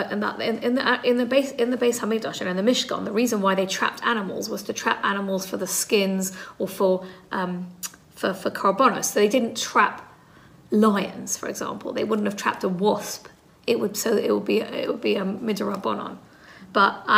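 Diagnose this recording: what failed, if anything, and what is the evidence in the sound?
No fault found anywhere.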